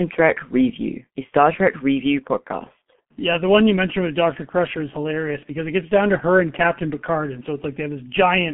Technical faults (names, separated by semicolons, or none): G.723.1 codec